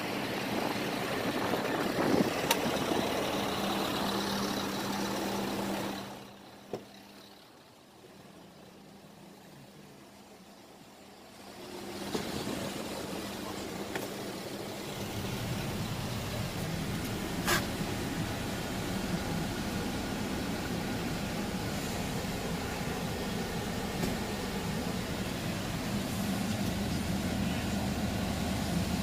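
At 25.11 s, compressed frames are skipped. About 50 ms of audio drops out, which fits two 24 ms frames, so the audio jumps ahead at that point.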